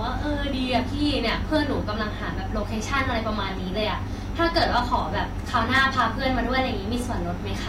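Hard clipping hits the speech at 1.28 to 1.56 s, 4.41 to 4.96 s and 5.56 to 6.02 s, where peaks overshoot a stage by about 3 to 4 dB and flatten, adding crackly high harmonics.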